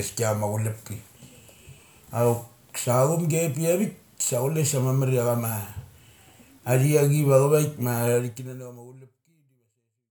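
No faults turn up anywhere in this speech recording.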